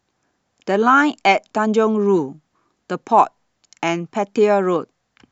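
Nothing in the recording stands out as a technical fault; the speech runs along without anything breaking in at any point.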